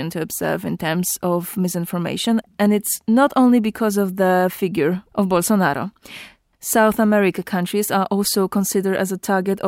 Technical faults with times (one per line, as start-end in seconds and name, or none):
none